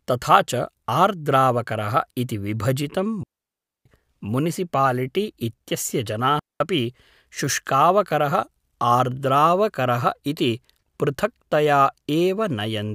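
A digital wireless dropout occurs twice as the receiver loses too much data and mutes with a very short fade. The speech drops into clean near-silence from 3.23 to 3.86 s, just before "मुनिसिपालिटि इत्यस्य", and again from 6.39 to 6.60 s, just after "मुनिसिपालिटि इत्यस्य", with no noise burst at either edge.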